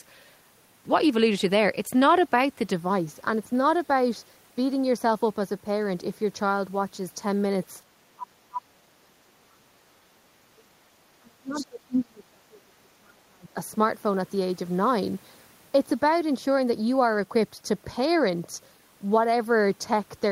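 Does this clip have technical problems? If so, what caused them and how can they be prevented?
Yes. Channel delay causing comb filtering runs from 2.73 s to the end. One channel arrives a fraction of a millisecond late, so the mono mix cancels at evenly spaced frequencies starting around 3 kHz, leaving the speech hollow and phasey. Aligning the channels before downmixing, or using just one, prevents this.

Speech is cut in two stretches, 8.15 to 10.82 s and 11.2 to 13.57 s, where the voice drops by up to about 35 dB. This is likely speech suppressed in double talk: with both sides speaking, the echo canceller couldn't tell the local voice from loudspeaker echo and attenuated both. A headset, or a canceller tuned to preserve double talk, avoids it.

From 11.53 to 11.66 s, a brief scrap of a second voice is audible, roughly 15 dB below the talker. It is likely the other side's voice leaking through, picked up from the loudspeaker and not fully removed by the echo canceller. 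Headphones or better echo cancellation stop this.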